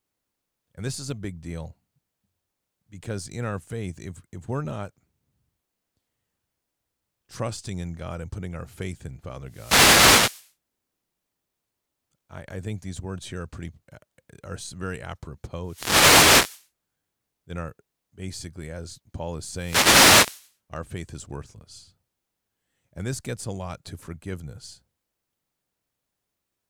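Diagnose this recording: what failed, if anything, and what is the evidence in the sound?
Wireless microphone noise hits in the analogue radio link: static bursts at 9.44–10.53, 15.63–16.69 and 19.50–20.55 s as multipath fades lift receiver noise, showing as broadband spectrogram smears over the speech.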